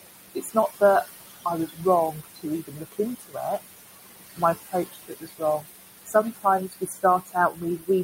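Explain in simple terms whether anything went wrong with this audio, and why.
Two problems come from the noise suppressor, the filter meant to clean up background hiss. The room's own background noise sits well under the speech.

Noise suppressor artifacts run through the whole clip. The filter pushes the background down hard, so the noise sinks between the words and rises under them.

Speech cut by the noise suppressor happens four times: 0.35 to 0.82 s, 1.45 to 3.6 s, 4.36 to 5.66 s, and 6.06 s to the end. The filter mistakes parts of the speech for noise and turns them down. Soft sounds and word endings seem swallowed. The stretch from 1.45 to 3.6 s loses about a second in total.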